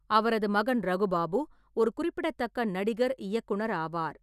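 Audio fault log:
Nothing stood out on listening to this speech recording.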